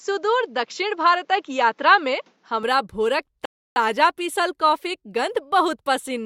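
Input switched to a poorer device, 0.0 to 2.63 s: the speech sounds narrower and duller, with nothing above 7.6 kHz and a faint new noise floor about 45 dB below the voice. The level holds steady. It clears with no gap just before "भोरक ताजा पीसल कॉफीक", likely from the recording moving off a lower-bandwidth input.

Rebuffering stall, 3.45 to 3.76 s: the player ran out of downloaded audio and paused, leaving 0.31 s of silence. Playback then resumes exactly where it stopped, at "ताजा पीसल कॉफीक". Nothing is skipped, but the pause adds that time.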